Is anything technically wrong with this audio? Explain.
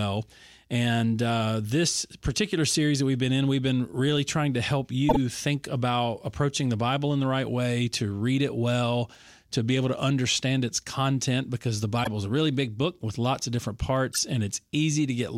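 Yes. The speech has four short bursts where a corrupt frame was decoded: at 2.67 to 2.72 s, at 5.09 to 5.17 s just after "really trying to help", at 11.99 to 12.07 s after "its content because the", and at 14.12 to 14.19 s after "with lots of different". Damaged bits in compressed frames were played as if valid, so misread gains and codes threw energy into the wrong frequencies. Each is heard as a brief chirp or noisy blip, loudest near 5.1 s, peaking roughly around -5 dBFS, and spanning a handful of frames.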